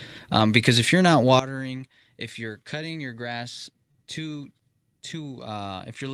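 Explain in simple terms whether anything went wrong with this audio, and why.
At 0.39 s there is a lost packet rebuilt from error correction. One 20 ms piece of the call went missing, but the next piece carried a rough backup copy of it. The receiver played that copy, so there is no gap, just a brief rougher, noisier moment.

At 1.39 s there is a sudden gain jump. The speech and the background noise both drop in loudness in a single step and stay lower until the end. That points to a volume setting that was likely changed instantly instead of being faded.

From 3.91 to 3.95 s there is a short concealed packet loss. About 20 ms of audio never arrived in time. The receiver filled the hole by stretching the last sound forward and then blending back into the real audio, which comes across as a brief smear.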